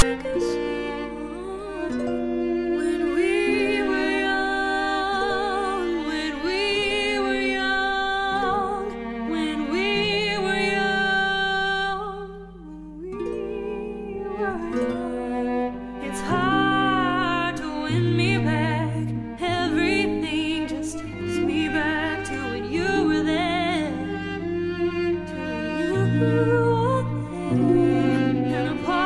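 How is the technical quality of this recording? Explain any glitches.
The recording has one glitch, right at the start. At 0.0 s, file tags played as audio: a block of text tags is read as sample values, giving a brief, loud rasp pushed off-centre to one side with hard edges. That one-sided offset sets it apart from an ordinary click or a burst of full-scale noise.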